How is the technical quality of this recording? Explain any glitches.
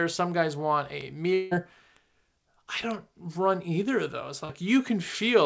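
The recording has three kinds of transmission and data faults within its 5 s of speech. The audio band stops at 8 kHz with coding noise, which fits a wideband call codec such as G.722 at 64 kbps.

Bit error spikes occur at 1.01 s, 1.97 s and 2.91 s. In each case a single flipped bit drove the sample value up or down by a power of two before it snapped straight back. The spike covers three consecutive samples at 1.01 s and 2.91 s and one sample at 1.97 s. Each is heard as an isolated, sharp, broadband tick that has nothing to do with the speech around it.

From 1.34 s to 1.53 s, about 180 ms of audio is missing, most likely because of a long network dropout in which packets stopped arriving. The receiver covered roughly 170 ms of the gap by extending the last sound it had, so the result is a fading buzzy or hissy continuation rather than a hard silence. The speech then resumes further along, and the lost section is never recovered.

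Short concealed packet loss affects 4.45 s to 4.51 s. About 40 ms of audio did not reach the decoder in time. The decoder synthesised a stand-in from the preceding sound and then crossfaded back into the real signal. The result is a brief smear or wobble lasting a few hundredths of a second, and any short consonant that fell inside that window may be lost.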